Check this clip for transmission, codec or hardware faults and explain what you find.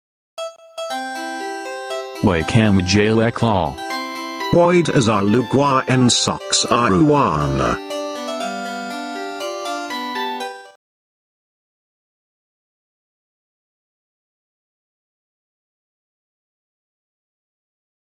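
There's one fault, and it runs the whole clip: gain pumping. The gain swings around 10 dB, pulling loud and soft parts closer in level and squashing the sound, likely from input gain set too high with a fast limiter clamping down.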